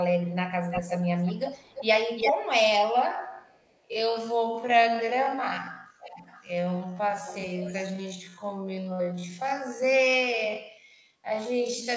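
Right at the start, from 0.26 to 0.35 s, there's a faint delayed copy of the speech trailing about 388 ms behind, very low, around 35 dB down. That's echo leak, most likely a loudspeaker on one side of the call whose echo canceller let some of its own pickup slip back into the call. It returns at 0.7–1.0 s and 1.25–1.86 s with a 340 ms lag, the first near 5 dB under the speech, the second about 15 dB down. At 2.17–2.33 s it's roughly as loud as the speech itself.

From 3.04 s to the end, the pace suddenly drops to a bit over half speed (0.525×) while the pitch stays put. That's a time-stretched section, likely software padding the audio to fill a slot by repeating tiny slices, so the speech drags. Inside that stretch the echo leak is still there. At 3.32–3.77 s it's barely audible, about 40 dB down, then at 6.0–6.52 s and 7.25–7.88 s it moves out to a 500 ms delay, sitting around 20 and 15 dB below the speech. 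Over all of this, the call's mic processing keeps everything under 8 kHz.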